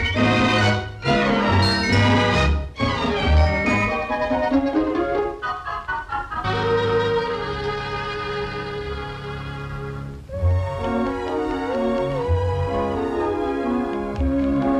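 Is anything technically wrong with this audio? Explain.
Yes. At 6.43 s the audio jumps forward with a brief blip, most likely a stream segment skipped: one chunk failed to load and playback resumed at the next, so material is missing. Unlike a dropout, there's no silent gap, just an abrupt discontinuity.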